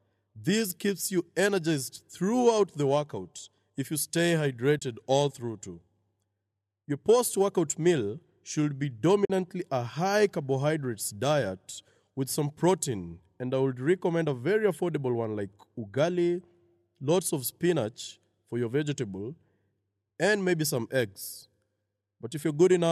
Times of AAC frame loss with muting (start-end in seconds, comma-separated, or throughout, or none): 4.79-4.82, 9.25-9.30